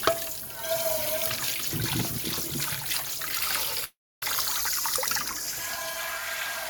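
At 3.84 s the everyday sounds stop and give way to a smeared, buzzy continuation of the last moment. This fades within about a tenth of a second, and about 280 ms of near-silence follows until the audio resumes at 4.23 s with roughly 0.38 s of material simply missing. The cause is likely a long network dropout with concealment filling the gap. Unlike a brief packet glitch, the fill decays into silence, and nothing is delayed, only skipped.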